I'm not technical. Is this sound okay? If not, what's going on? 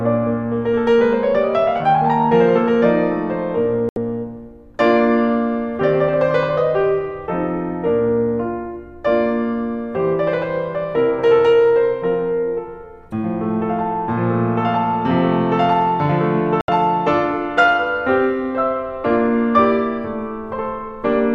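No. The music has two digital broadcast dropouts, at 3.89 s and 16.61 s. Each time, the receiver stopped getting clean data and muted for about 72 ms, which fits a few lost frames. That slice of music is gone, not just quiet.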